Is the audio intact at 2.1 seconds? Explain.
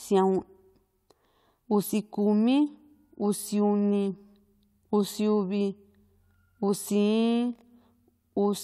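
Yes, the audio is intact at 2.1 seconds, with no fault audible in the speech at that moment.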